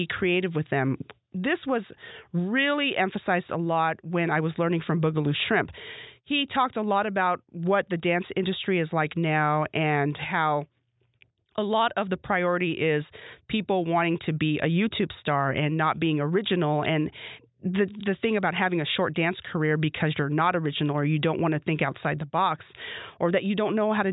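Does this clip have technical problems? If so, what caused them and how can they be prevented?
No, this speech recording has no technical problems that can be heard. There is nothing here to trace to a cause or to prevent.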